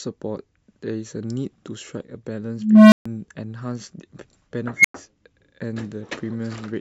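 Speech with two bursts from an unstable filter, a recursive stage whose feedback runs away. At 2.57 s a low tone near 200 Hz swells over 0.35 s until it clips, ends at 3.06 s, then drops to 0.14 s of silence. A second one at 4.77 s builds a squeal near 2 kHz in 0.08 s, ends at 4.94 s and leaves 0.1 s of silence. On a spectrogram each shows as a bright horizontal line thickening to saturation, then a blank gap. The waveform shows an envelope flaring out until it clips before dropping to silence.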